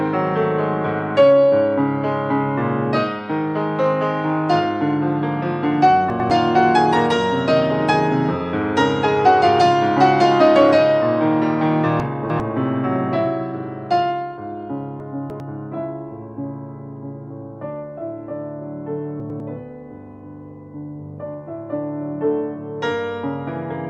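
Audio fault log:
6.1–6.3 s, chunks out of order: a block of about 100 ms played one block late, so the sound briefly jumps back.
12.0–12.4 s, chunks out of order: a 100 ms block played about three blocks late, so the passage sounds jumbled and plays out of sequence.
15.0–15.4 s, chunks out of order: a 100 ms block again played about three blocks late, giving a scrambled moment where the misplaced audio meets its neighbours.
19.2–19.4 s, chunks out of order: a 100 ms block played one block late, so two short pieces swap places at hard joins.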